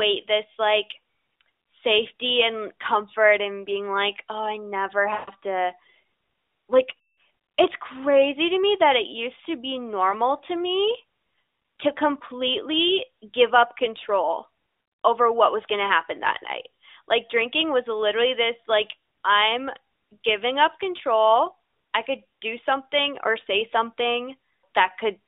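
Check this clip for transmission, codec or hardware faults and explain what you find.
Three dropouts from lost AMR speech frames are audible in the speech, at 5.14 to 5.31 s, 6.98 to 7.20 s and 10.10 to 10.14 s. Radio errors corrupted frames, so the decoder filled the gaps with its last good pitch and vocal tract settings at falling gain. The first two gaps fit runs of about seven and ten 20 ms frames. There the sound smears, then fades toward silence. The last is a single frame, heard as a brief dip, through the 300 to 3700 Hz AMR narrowband line.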